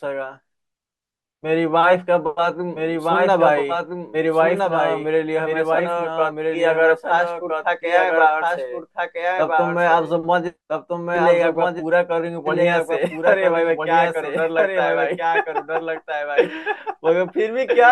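Throughout the speech, a doubled audio track sits underneath: a second full-band copy trails about one and a half seconds behind, roughly 5 dB quieter. Unlike an echo, it never decays or repeats and carries no room colour, likely from a second, slower capture path.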